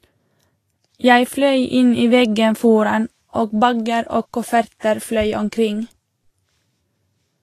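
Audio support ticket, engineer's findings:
Speech hissy and grainy throughout, treble smeared, nothing above 14.2 kHz. Likely Vorbis compression at a low rate, around 31 kbps. Coarse treble quantisation turns fine detail into noise.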